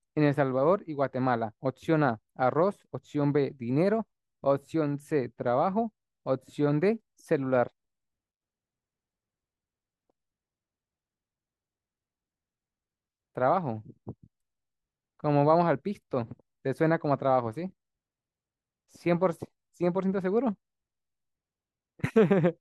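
No technical faults can be heard anywhere in the speech recording; the signal stays continuous and stable throughout.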